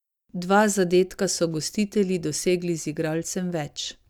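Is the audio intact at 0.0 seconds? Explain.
Yes, at 0.0 seconds the speech is intact, with no dropout, distortion or other technical fault heard there.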